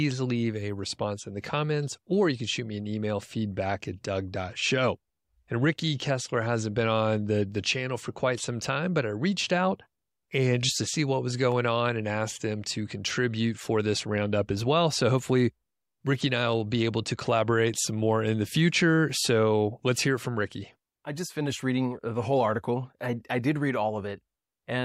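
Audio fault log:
11.52 s electrical switching spike: a nearby switch or static discharge likely arced into the line, laying one sharp snap of around -25 dBFS over the speech.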